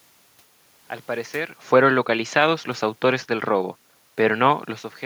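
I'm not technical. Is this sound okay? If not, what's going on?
Yes, nothing in this speech recording points to a problem with the equipment or the way it was captured. You can hear some background noise from the room, and around one and a half seconds the talker's level shifts as if they moved relative to the microphone, which is ordinary and not a fault.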